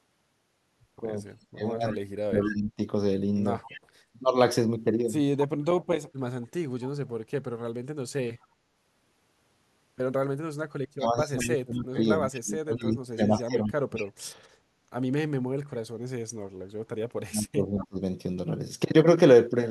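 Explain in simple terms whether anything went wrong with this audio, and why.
Several things went wrong on a call where one side was using a loudspeaker.

Speech suppressed in double talk: when both people talked at once, the echo canceller likely couldn't tell the near talker from the loudspeaker's echo and turned everything down. From 1.41 to 4.25 s the voice sinks or drops out for about a second in total, and from 10.6 to 17.99 s for about four seconds.

Echo leak: the loudspeaker side's echo canceller likely failed to remove everything its microphone heard, so some of it was sent back. A faint repeat of the voice follows about 219 ms later, between 1.89 and 14.1 s and again briefly around 17.8 s.

Background gated by the echo canceller: while the loudspeaker was playing, the canceller briefly turned the microphone down. At 3.86 to 3.92 s the room sound dips for a split second, then returns.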